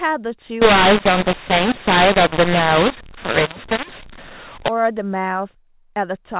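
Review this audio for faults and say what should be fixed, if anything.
From 0.62 to 4.68 s, a mu-law and A-law mix-up: A-law speech decoded as mu-law scrambles levels, filling pauses in the waveform with noise and smearing broadband hash across the spectrogram. Signal the G.711 law with the stream and decode it with the matching A-law table.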